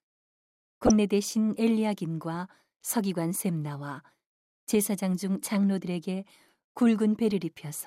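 A brief burst of noise blips cuts into the speech from 0.86 to 0.91 s. This is DAB burbling: residual bit errors corrupted several MP2 frames, putting short blips of noise in single sub-bands.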